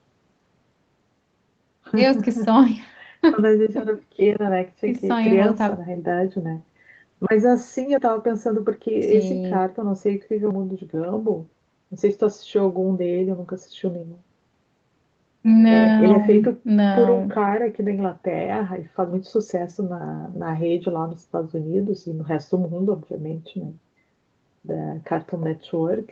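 Speech with no technical faults: nothing sits above 8 kHz, consistent with a wideband Opus call codec at a modest bitrate, and the lowest bass is trimmed by ordinary call microphone processing.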